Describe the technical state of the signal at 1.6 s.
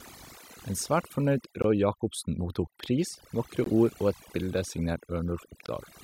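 A gap between chunks runs from 1.62 to 1.64 s, just after "svært fornøyd": a 20 ms hole of silence with hard edges where two pieces of the stream were joined late or padded. Its timing fits audio delivered in 2-second chunks. Nothing is missing, but the speech is abruptly interrupted.

Overdone noise removal also affects this moment, as it does the whole clip. The reduction was set so aggressively that frequency bands near the estimated noise floor are pushed almost to nothing, taking quiet parts of the speech with them. The background drops and breaks up into twinkling specks.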